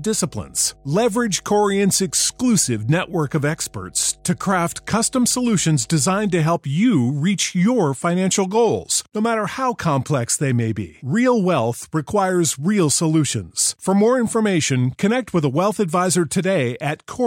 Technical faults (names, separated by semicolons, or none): mains hum